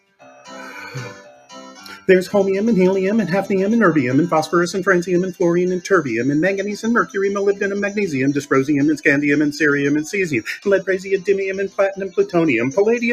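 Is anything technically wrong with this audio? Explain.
Yes. There's a speech-style noise suppressor running over the whole clip, which isn't appropriate for this kind of material. It treats sustained tones, room ambience and reverb as if they were background noise and keeps pulling them down, so the gain is always drifting by roughly 5 dB. You hear that as a pumping and flutter: attacks come through fine, but held sounds and decays sag and thin out rather than ringing naturally.

There are also two spots where the sound is cut by the noise suppressor much harder than anywhere else. From 0.00 to 0.51 s, about half a second, the level drops by as much as about 18 dB. Then from 1.14 to 2.08 s, roughly a second, it dips by up to about 13 dB. In both places the suppressor seems to have classed the steady, fading material as noise and clamped down on it, so those passages sound hollowed out.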